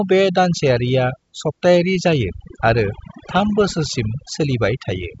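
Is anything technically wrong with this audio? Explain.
Yes, there's overdone noise removal running through the whole clip. A noise reducer set too aggressively is switching off frequency bands near its noise estimate, so the background drops and breaks up into twinkly specks. The wideband telephone coding, likely G.722, just caps the top end around 7.7 kHz.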